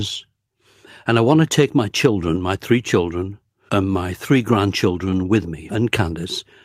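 No technical faults can be heard anywhere in this speech recording.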